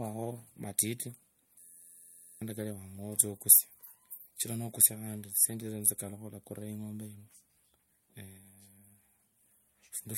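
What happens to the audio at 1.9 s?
At 1.9 s you're in the middle of a system hang loop, running from 1.60 to 2.42 s. The playback froze while the hardware kept replaying one 11.61 ms chunk, which fits a 512-sample buffer. That produces a steady 86.1 Hz buzz in place of about seven-tenths of a second of speech.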